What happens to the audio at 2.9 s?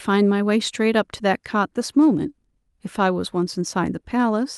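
Nothing goes wrong at 2.9 s; the speech there plays through intact, with no dropout, click or distortion.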